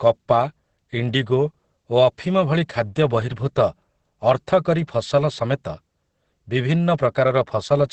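Opus voice compression throughout: nothing remains above 8.5 kHz, and coarse SILK excitation coding leaves the speech muffled, hoarse and robotic, which fits about 10 kbps.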